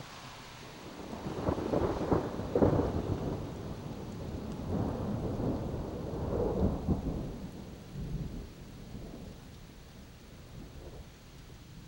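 No technical faults can be heard anywhere in this recording.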